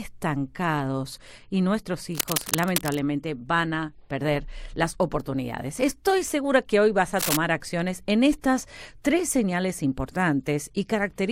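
A speech clip with two bursts of scratchy, rustling noise laid over the voice, first from 2.12 to 2.99 s, a little quieter than the speech, then a shorter patch from 7.19 to 7.37 s at roughly the same loudness as the speech. This is cable scratch noise, likely from a worn cable, connector or control being moved, so that its contact resistance jumps about and injects dense, irregular noise into the signal.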